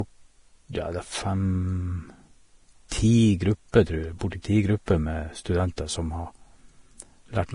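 From start to finish the speech sounds hissy and grainy, with roughened tones, smeared consonant attacks and nothing above 10.6 kHz. This is likely heavy Vorbis compression, consistent with a low bitrate near 31 kbps, where coarsely quantised treble detail turns into noise.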